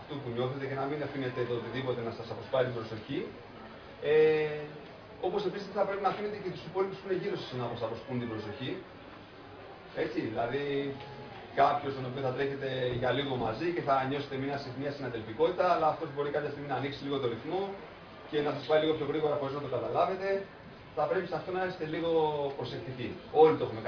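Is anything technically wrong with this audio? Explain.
No, nothing technically wrong stood out on listening to this audio.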